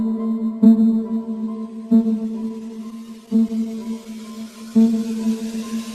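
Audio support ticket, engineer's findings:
Repeated stalls (stutter), 2.23 to 4.07 s: 19 short hitches, none longer than 18 ms, about 188 ms filled in total, roughly a tenth of that stretch. Nothing dropped, just a dragging, choppy feel. Jitter buffer kept running dry as packets showed up late or slow, and the receiver stretched the last bit of sound across each gap until fresh data arrived.

Jitter buffer slow-down, 4.32 to 4.90 s: sound runs at about 84% speed with no pitch change, drawn-out. About 98 ms added in under 0.6 s. Buffer was low or had just raised its target delay, so it padded itself by repeating single pitch periods and scraps of pauses over and over.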